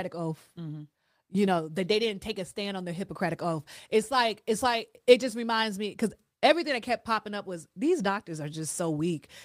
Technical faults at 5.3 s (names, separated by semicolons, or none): none